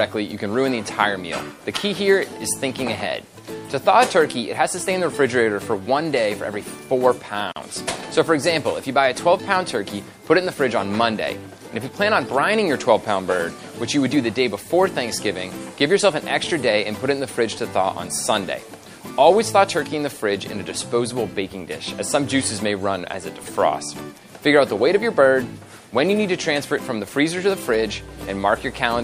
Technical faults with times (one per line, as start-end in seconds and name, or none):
0.00-29.04 MP3 compression
7.52-7.56 gap at a join of encoded pieces